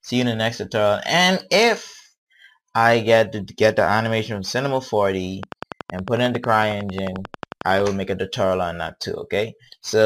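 A regular train of clicks runs from 5.43 to 7.81 s: around thirty sharp, near-identical ticks at 11.1 per second, peaking roughly 10 dB above the surrounding audio. They are most likely interference from nearby equipment or a faulty connection or power supply injecting pulses. What marks it as a click train rather than random crackle or dropouts is the steady rhythm and repeated shape of each pulse, and that the ticks sit on top of the sound instead of removing any of it. Inside that stretch, at 5.60 s, a gap between stream segments cuts a hard-edged hole of about 16 ms into the audio. Two consecutive segments were timestamped slightly apart, and the player filled the space with silence, which fits a segment join in a stream of roughly 6 s segments. It differs from the clicks because it is a brief absence of sound with abrupt edges rather than an added pulse. It also differs from packet loss, since nothing is missing on either side of the gap and the silence is simply inserted between intact material.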